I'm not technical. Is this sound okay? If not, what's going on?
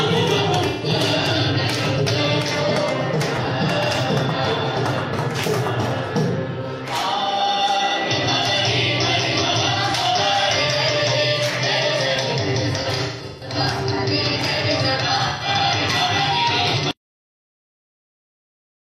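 No, there are two kinds of problems in it.

The first is AAC frame loss with concealment. Small chunks of the compressed audio went missing, and the player covered each gap by guessing from the sound just before it. You'll hear brief patches that sound smeared, noisy or phasey instead of clean. That happens at 0.69 to 0.89 s, at 15.28 to 15.48 s, and in a longer stretch from 12.81 to 13.56 s, where the gaps are scattered and the longest runs are roughly 150 ms.

The second is a cut-off end. At 16.91 s the audio stops dead in the middle of a sound, with no natural fade or ending. The last part of the recording was never written out or played back, so the rest of the file is just silence. It's a hard stop, not a proper ending.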